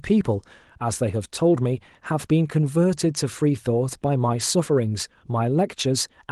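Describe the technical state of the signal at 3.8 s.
At 3.8 s the speech signal is intact, with nothing faulty at that moment, and the Opus voice coding there is running as intended at 24 kbps in hybrid mode.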